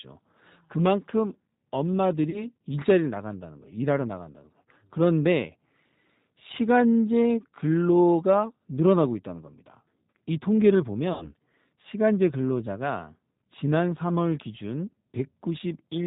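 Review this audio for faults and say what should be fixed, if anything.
The speech passed through the G.729 codec for the whole clip, and its narrowband, parametric coding is plainly audible throughout. The encoder keeps only a vocal tract filter, a pitch predictor and a few pulses per 10 ms frame, consistent with an 8 kbit/s setting. So nothing above 4 kHz survives, and the voice sounds muffled, slightly rough and synthetic. To prevent it, negotiate a wideband codec such as G.722 or Opus at a higher bitrate on this link.

Packets were dropped twice, and the decoder filled the gaps with VoIP packet loss concealed by the speech codec. It extended its last pitch and filter while lowering the gain. At 2.30 to 2.47 s the gap is about 30 ms, which fits three lost 10 ms frames. The sound smears into a brief buzzy tone or coloured noise and stays weak as the decoder recovers. At 11.13 to 11.32 s the gap is about 80 ms, and the stretched sound fades more noticeably before the speech returns weak or distorted. 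To prevent it, reduce network loss with QoS prioritisation and a properly sized jitter buffer, or add forward error correction.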